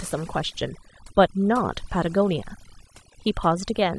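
It's a short speech clip with overdone noise removal throughout. The gate clamps bands sitting near its noise estimate, leaving twinkly near-silent gaps and taking quiet parts of the voice with them.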